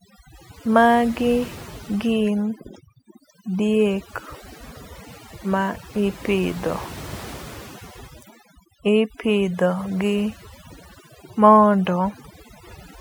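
Throughout the speech, overdone noise removal is audible: bands near the noise estimate are pulled far down, leaving near-silent gaps with twinkling specks. A spectrogram shows a speckled, patchy background and quiet speech detail carved away.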